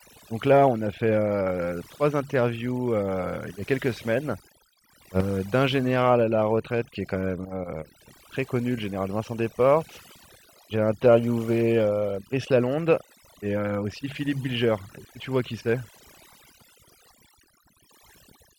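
Overdone noise removal runs through the whole recording, from the first second to the last. A noise reduction stage was pushed too hard: wherever a frequency band sits close to its estimate of the background noise, it pulls that band down to almost nothing, taking the softer parts of the speech along with the noise. The gaps fall to a hollow near-silence dotted with brief, glittering specks.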